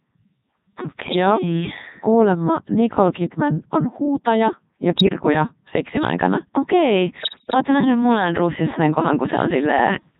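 Throughout, the speech has the buzzy, robotic sound of the Codec 2 vocoder, which fits its 3.2 kbit/s mode. The voice is rebuilt from sine waves, so a spectrogram shows rigid, evenly spaced harmonic stripes.

Bit errors on digital voice radio hit at 1.08–1.16 s, 4.98–5.16 s and 7.20–7.54 s, the last being the worst. Corrupted frames jump in pitch and level and break into warbling bleeps. On a spectrogram they show as abrupt harmonic jumps, and the waveform shows sudden changes in level.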